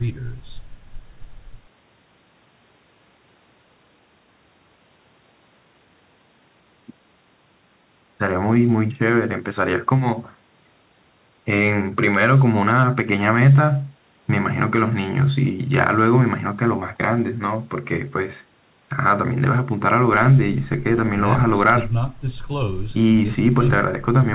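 No technical faults occur anywhere in the speech, which comes over a WebRTC call path whose G.711 A-law coding leaves nothing above 4 kHz, so there is nothing to describe in time order.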